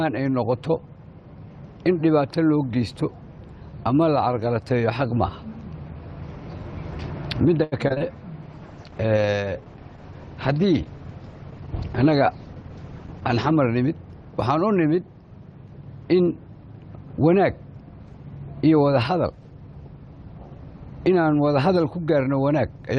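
Choppy stutter breaks up the audio from 7.63 to 8.02 s: repeated packet loss (robotic sound), with four gaps up to 84 ms patched by extending prior sound, about 38% of that span. From 8.51 to 14.00 s the audio turns rough and muffled, its top end falling from 12 kHz to 8 kHz for about 5 seconds. That fits a call bitrate drop from about 32 to 10 kbps, forcing coarser coding. Between 12.05 and 12.54 s the sound hurries forward at unchanged pitch, running at 114% speed: a jitter buffer speed-up trimming roughly 70 ms of pitch-period slices to shed excess delay.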